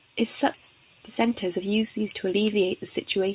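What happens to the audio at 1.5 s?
A jitter buffer speed-up runs from 1.24 to 1.99 s, covering the moment at 1.5 s. The receiver's buffer had built up more speech than it targets, so to drain the excess it repeatedly cut out short slices of one or a few pitch periods, around 50 ms in total. The speech plays at about 106% speed with its pitch unchanged, giving a slightly hurried, compressed delivery through that stretch.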